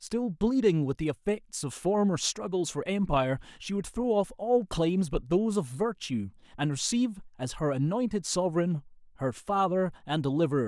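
No dropouts, clicks, distortion or timing faults are audible anywhere in this speech recording.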